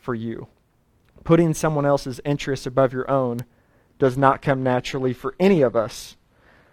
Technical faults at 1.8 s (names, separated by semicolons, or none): none